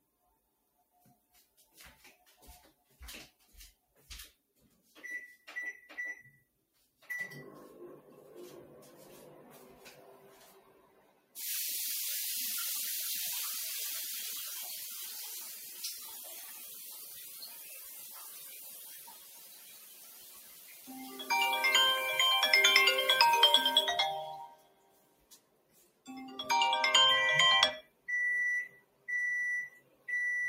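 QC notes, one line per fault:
Throughout: noise suppressor applied to music or sounds. A speech-tuned suppressor treats steady content as noise, so gain swings by around 15 dB and the sound pumps and thins. On a spectrogram, sustained bands flicker in density. On the waveform, the envelope breathes between onsets.
0.01–5.47, 6.38–7.03, 10.17–11.36, 15.44–21.27, 24.46–26.08, 27.82–28.08, 28.69–29.08, 29.77–30.08 s: sound cut by the noise suppressor. Steady and decaying parts drop by about 13 to 15 dB and tails are truncated, while transients pass. The waveform shows abruptly shrinking sustains. The spectrogram shows tails fading early.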